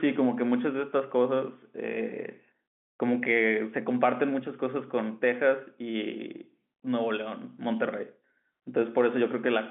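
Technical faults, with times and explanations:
No technical faults can be heard here; the sound simply carries the narrow band of a telephone line, with nothing above about 3.7 kHz.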